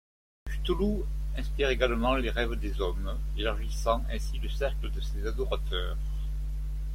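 Digital silence fills the first 0.47 s, then speech snaps in mid-sound with no natural onset: a cut-off start, because the recording began late.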